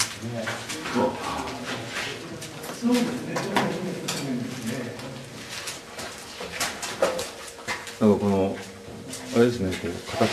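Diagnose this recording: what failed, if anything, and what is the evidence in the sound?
Nothing failed; no audible fault anywhere in the recording.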